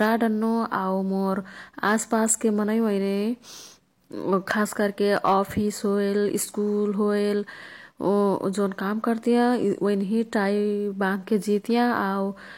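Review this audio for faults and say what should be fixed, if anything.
Brief crackle breaks out on the loud speech peaks at 0.01–0.09 s, 1.84–2.32 s, 4.33–4.61 s and 5.12–5.38 s. This is hard clipping. The level overshoots a stage's ceiling by about 2 to 5 dB, so the peaks are cut flat and throw off high harmonics. Lowering the gain ahead of the converter and leaving several decibels of headroom would prevent it.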